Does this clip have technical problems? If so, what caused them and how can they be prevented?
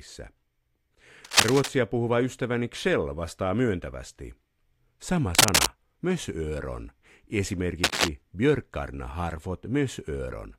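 Yes. Harsh scratching bursts, louder than the speech, cover 1.25 to 1.69 s, 5.35 to 5.68 s and 7.84 to 8.08 s. This is cable scratch noise, likely a worn cable or connector shifting so its contact resistance jumps. Replace worn leads and keep cables still while recording.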